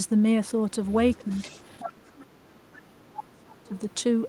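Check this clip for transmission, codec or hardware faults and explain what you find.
There are two problems here, and they're tangled together around a far-end talker coming back through the line.

Other side's voice leaking through, from 0.89 to 1.89 s: a second voice sits underneath the speech, about 15 dB below it, so it's faint. The likely cause is the talker's loudspeaker output getting picked up by their mic, with the echo canceller leaving a residue instead of removing it. It comes across as a quiet, separate voice riding under the main one.

Speech suppressed in double talk, first at 1.17 to 1.27 s and then from 1.86 to 3.73 s: the near-end speech gets pushed down while both sides overlap. The first dip is brief and shallow, around 10 dB. The second runs for nearly two seconds and goes much deeper, something like 35 dB, which is close to muted. That's likely the echo canceller failing to tell its own talker from the echo and clamping everything down, so the voice drops away.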